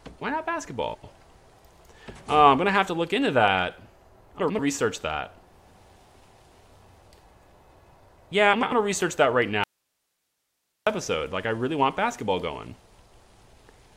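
Frames out of order appear three times: 0.94 to 1.13 s, 4.40 to 4.59 s, and 8.53 to 8.73 s. Each time, two neighbouring blocks of about 93 ms swap places. That block length fits runs of four frames. The decoder plays the later block first. The result is a brief garbled flutter. No time is lost, so the sound carries on at the right place afterwards.

At 9.64 s comes an audio dropout to a faint residue. The signal vanishes abruptly for 1.23 s, returning at 10.87 s. Only hiss remains in the gap, far below the normal level, roughly 55 dB down. It is not a pause or fade. The cut is sudden at both ends. The likely cause is the wanted signal being lost while the path after the break stayed live.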